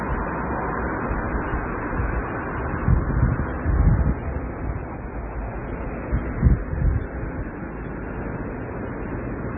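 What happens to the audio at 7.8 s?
At 7.8 s the audio carries the same heavy MP3 compression damage that runs through the whole clip, likely from a very low bitrate near 16 kbps. The encoder has dropped everything above 3.5 kHz and zeroed weak spectral lines, leaving a dull, watery, swirling sound with smeared attacks.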